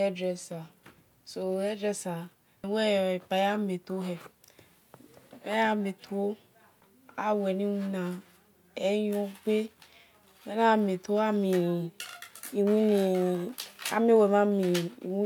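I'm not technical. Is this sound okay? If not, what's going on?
Yes, the recording comes across as technically sound, with no dropouts, glitches or distortion heard anywhere in it.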